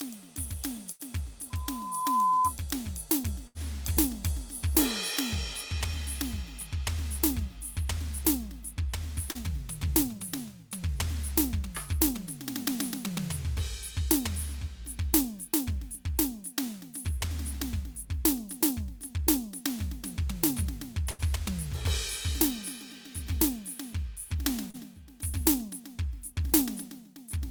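Burst of packet loss at 0.91 to 1.02 s, again at 3.47 to 3.58 s and 21.11 to 21.22 s: each time about 80 ms of the music failed to arrive, and the receiver continued the last sound and faded it down before jumping ahead past the missing stretch.

Loudspeaker feedback squeal from 1.50 to 2.53 s: the microphone picks up its own loudspeaker output, and at 1 kHz the loop gain exceeds one. A pure tone swells over most of a second to sit a few decibels above the music.

Short concealed packet loss at 9.31 to 9.38 s and 24.71 to 24.77 s: roughly 40 ms went missing each time, patched by extending the preceding sound and crossfading back. Each is heard as a brief smear or wobble in the music.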